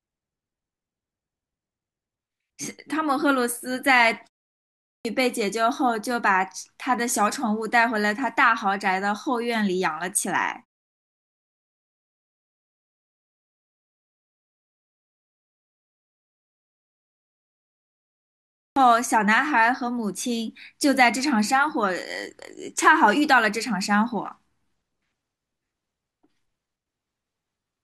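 At 4.75 s and again at 18.46 s, speech resumes with a clipped start after a pause. The output device drops into sleep during silence and wakes late. About 0.3 s is swallowed each time, after pauses of 0.54 s and 7.9 s, so syllables burst in abruptly.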